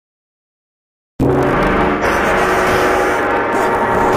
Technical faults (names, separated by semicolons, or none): AAC frame loss with concealment